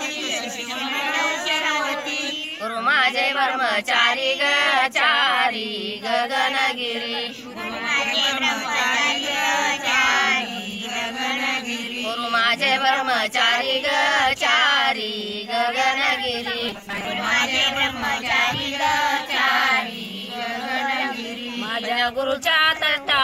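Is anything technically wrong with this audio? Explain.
Yes. From 16.69 to 17.05 s there is robotic sound from repeated short buffers: a rigid, metallic 200 Hz buzz. Most of that stretch is a fragment about 5 ms long looping, likely because audio arrived too slowly and the gaps were filled by repetition.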